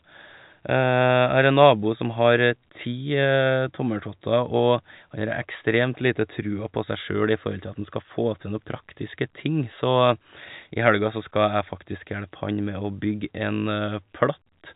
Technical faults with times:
none

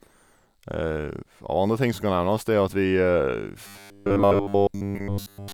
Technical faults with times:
3.67-5.53 robotic sound from repeated short buffers

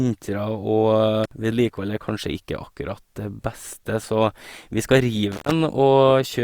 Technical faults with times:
1.24-1.31 intermittent contact
5.32-5.51 intermittent contact

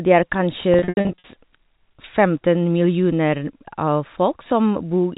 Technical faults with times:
0.74-1.24 packet loss with pitch repetition

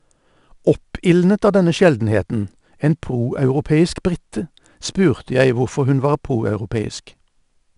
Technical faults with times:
0.00-7.77 4-bit ADPCM compression

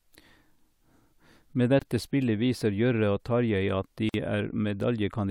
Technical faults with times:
1.79-1.82 gap at a join of encoded pieces
4.09-4.14 gap at a join of encoded pieces

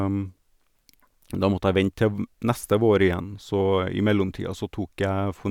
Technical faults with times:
none

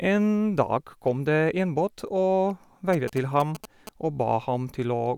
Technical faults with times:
2.93-3.89 GSM signalling bursts

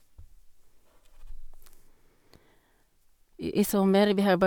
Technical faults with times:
none

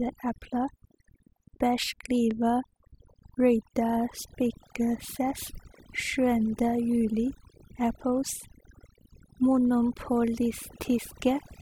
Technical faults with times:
0.00-11.61 overdone noise removal

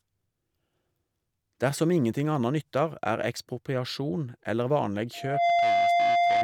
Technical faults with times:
5.13-6.43 loudspeaker feedback squeal

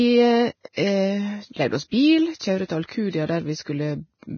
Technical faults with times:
0.00-4.37 Vorbis compression

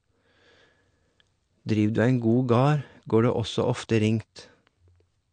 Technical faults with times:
0.00-5.32 MP3 compression

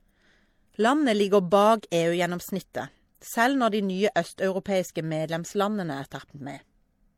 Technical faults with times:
0.00-7.17 transcoding between lossy codecs

